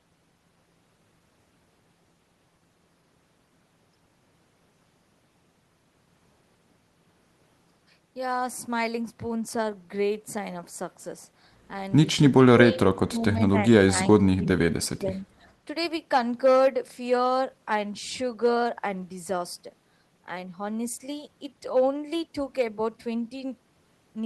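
From 12.38 to 13.57 s, 13.89 to 14.46 s and 14.74 to 15.24 s, the speech drops by around 30 dB (about 25 dB in the last stretch). That's speech suppressed in double talk, likely an echo canceller turning everything down while the far end spoke.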